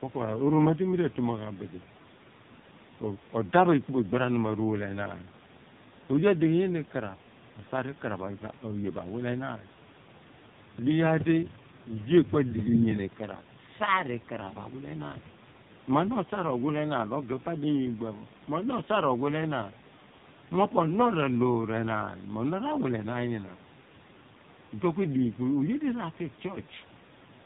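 From start to finish the speech has gone through the AMR narrowband mobile codec at around 5.9 kbps, so everything above 4 kHz is gone and the voice sounds heavily buzzy and synthetic. The room noise, about 21 dB down, comes through as a swirling warble.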